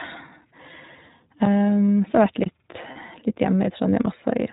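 Throughout, the speech carries the sound of the iLBC codec, plainly audible as a rough, slightly synthetic edge. Each 20 ms frame is coded independently, and a spectrogram shows nothing above 4 kHz, consistent with the 15.2 kbps narrowband mode.

At 1.45 s, a block of digital silence about 9 ms long drops in as a brief tick. The waveform falls to a flat, near-silent line and jumps back with no fade. A second block, from 2.44 to 2.46 s, lasts about 23 ms and fits a 1024-sample buffer that was not filled in time. It is heard as a short hole, and the spectrogram shows a blank vertical stripe bordered by broadband lines.

From 2.92 to 2.97 s, lost iLBC frames leave a 40 ms gap, which fits two missing 20 ms frames. The decoder repeats the last pitch cycle mixed with noise, so the gap sounds like a held, faintly buzzy vowel. It appears as a repeated, periodic waveform with smeared harmonics, and the voice comes back right after.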